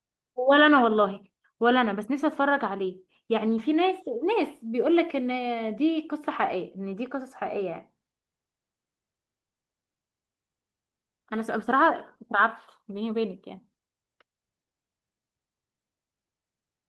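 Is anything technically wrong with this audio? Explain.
Yes. At about 3.57 s there is a lost packet rebuilt from error correction: one 20 ms packet went missing, and the decoder filled it from the low-bitrate copy carried in the next packet. There is no gap, but that brief frame sounds rougher and noisier than the surrounding speech.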